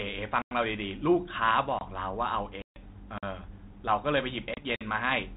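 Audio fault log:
0.42–0.51 s, 1.79–1.81 s, 3.18–3.23 s and 4.76–4.81 s, block of digital silence: the audio drops straight to zero and back with no fade. The lengths are about 93 ms, 23 ms, 46 ms and 46 ms. They fit output buffers of 4096, 1024 and 2048 samples not getting filled in time. The longest one reads as a real gap.
2.62–2.82 s and 4.54–4.65 s, packet loss on an ADPCM call: the speech in this 32 kbit/s G.726 stream has hard-edged holes of about 140 ms (roughly fifteen packets) and about 30 ms (a few packets). Once the sound comes back, it's slightly distorted. That's because the decoder's adaptive predictor and step size have drifted away from the sender's, and they take a few tens of milliseconds to settle back in.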